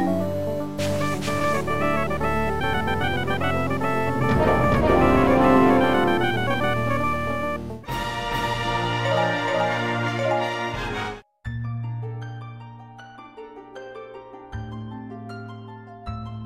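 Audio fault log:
0.79–10.09 s, doubled audio track: a second capture of the signal, likely through a slower path, is being mixed back in, so the full-band sound repeats roughly 400 ms later at nearly equal level, dry and without decay, starting and stopping abruptly.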